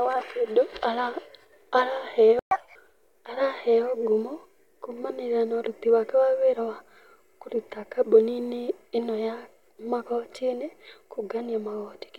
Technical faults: playback stall; catch-up at higher speed

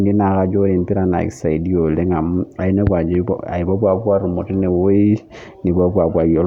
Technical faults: none

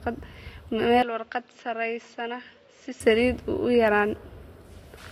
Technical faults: input switched to a poorer device

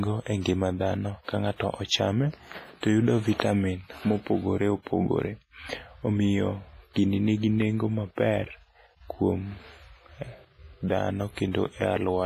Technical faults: WMA compression

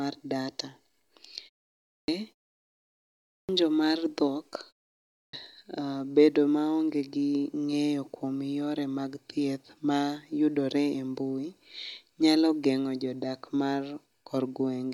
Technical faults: clipped start after a pause

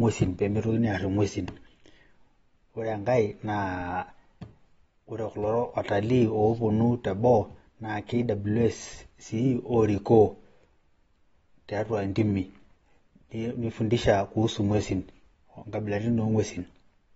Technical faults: AAC compression

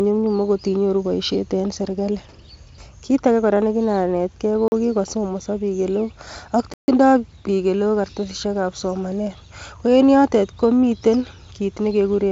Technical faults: block of digital silence

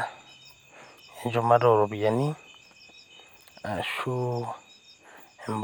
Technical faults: none

